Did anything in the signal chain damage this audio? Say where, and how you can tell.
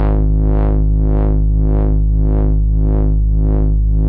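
No, nothing in the signal chain damaged this audio.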